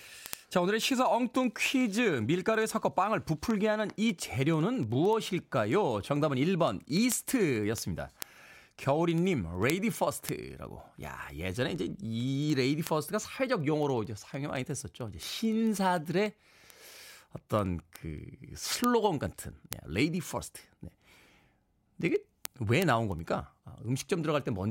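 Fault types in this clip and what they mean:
Word clock ticks: a receiving device running on its own clock, not locked to the sender's digital link, slips by one sample each time the two clocks drift past each other, here by a mismatch of roughly 300 parts per million. Across the speech from 0.11 s to 24.67 s this produces several hundred ticks, about every 70 ms. That strict, unbroken regularity separates them from the irregular clicks of buffer dropouts.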